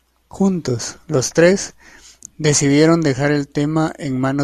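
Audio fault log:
No faults can be heard anywhere in the speech. Nothing in it needs a time or an entry in this log.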